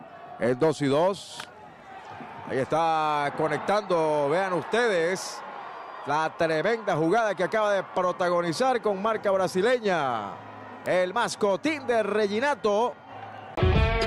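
No technical faults are audible.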